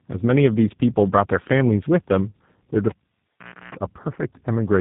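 It's a short speech clip, and the whole thing has that rough, muffled, warbly quality of tandem speech coding, with nothing above 3.8 kHz. It sounds like two speech coders in a row, which fits a GSM full-rate leg feeding a G.711 hop and then G.729A at 8 kbit/s, each one re-coding the previous one's damage. Then at 2.89 s a cable gets pulled and plugged back in. You hear a pop, then about 0.8 s of near silence, a roughly 0.32 s burst of 60 Hz mains buzz while only the tip is making contact, and another pop as the sound comes back at 3.75 s.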